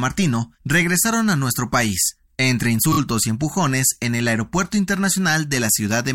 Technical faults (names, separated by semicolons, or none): repeated frames